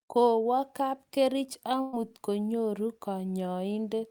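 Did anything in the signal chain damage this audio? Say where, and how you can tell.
Yes. At the network stage, a burst of packet loss hit the speech from 1.81 to 1.95 s. Several consecutive packets never arrived in time to play, so the receiver papered over the hole with about 113 ms of concealment, extending the last good sound and letting it decay rather than going silent. When real audio returns, about 120 ms of the original speech has simply been skipped, so the sentence jumps ahead across the gap.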